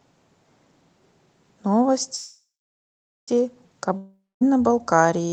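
It's a speech clip coming through a call codec, and the top end stops around 8 kHz, which fits an Opus-style call path. At 2.15 s there's a call audio freeze: the last sound smears into a fading buzz, then sits silent for about 0.87 s before resuming at 3.30 s. That's likely packets stalling in transit, so the speech just picks up late with nothing lost. Then at 3.97 s a long network dropout hits: another fading buzz, roughly 0.21 s of silence, and it comes back at 4.43 s with about 0.44 s of speech simply gone.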